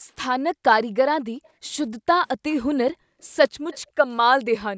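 The echo canceller gated the background, clamping the microphone path by about 40 dB at 0.00–0.07, 0.49–0.59, 1.23–1.63, 2.03–2.15, 2.93–3.21 and 4.69 s to the end. The room sound drops out briefly, for longest around 1.2 s and 2.9 s, then snaps back. From 3.72 to 3.79 s a faint copy of the speech returns about 257 ms late, well below the main speech. This is likely an echo leak, where the canceller failed to remove the loudspeaker signal.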